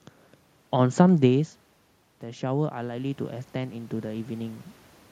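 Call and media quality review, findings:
Automatic gain rising, 2.21 to 4.59 s. Voice and room noise swell together over about 2.4 s, roughly 8 dB of added gain. Probable component: AGC in capture path. Mechanism: input fell by about 15 dB, AGC judged the level too low and ramped gain up slowly, lifting the background along with the voice. Level shift near 1 s is the talker moving relative to the mic, not the system. Room noise is acoustic.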